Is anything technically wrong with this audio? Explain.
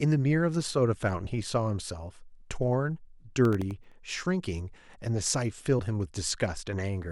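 Yes, the speech has two distinct faults.

From 1.23 to 1.27 s there are compressed frames skipped. Whole frames never reached the output, either missing from the stream or rejected by the decoder as corrupt, so playback jumps forward by roughly 50 ms of audio, and a fragment of the speech is simply absent.

From 3.45 to 3.92 s there is processor overload crackle. The processor repeatedly failed to deliver very short buffers, each under a millisecond, before their deadlines, and a handful of them were missed across this stretch. Each missed buffer was replaced with silence, leaving tiny hard-edged dropouts. Scattered through the passage, these produce a gritty, crackling texture over the speech that stops once the load eases.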